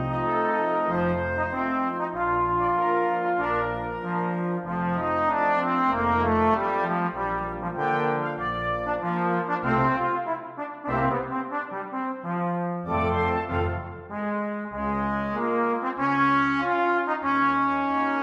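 No technical faults are audible anywhere in the clip.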